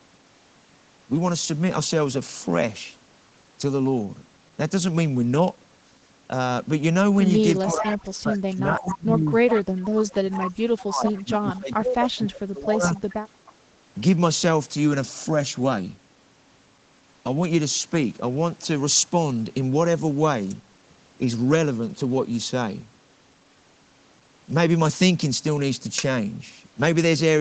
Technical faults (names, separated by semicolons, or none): echo leak; speech suppressed in double talk